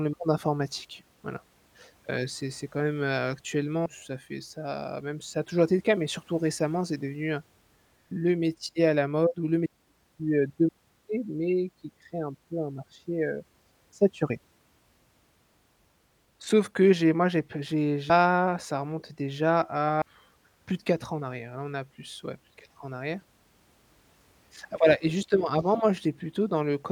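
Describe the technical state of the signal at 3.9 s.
Right at 3.86 s there's a case of compressed frames being skipped. The speech jumps forward by roughly 300 ms, as if a chunk of the recording just isn't there. That points to a run of around seven frames, with a 32 ms frame size, that were either missing from the file or rejected by the decoder as corrupt.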